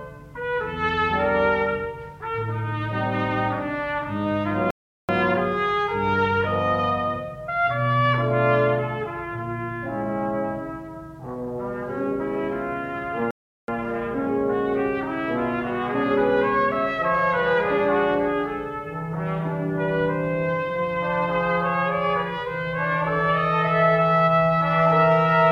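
A playback stall hits at 4.71 s: the sound cuts out abruptly for about 0.38 s, then returns at 5.09 s. A second stall follows at 13.31 s, again silencing the output for roughly 0.37 s before it resumes at 13.68 s. Both gaps are dead silence that interrupts the audio mid-flow. The likely cause is the player briefly running dry of buffered data, or its output thread being blocked, so nothing reached the output until it caught up.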